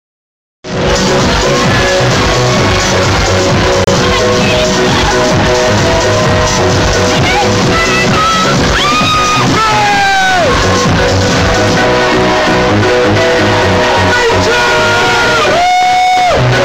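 A brief silent hole opens at 3.84 s and lasts until 3.89 s, with the sound resuming as though it had kept playing underneath. This is likely a Bluetooth dropout, where packets failed to reach the headphones in time; the missing stretch fits roughly two lost packets.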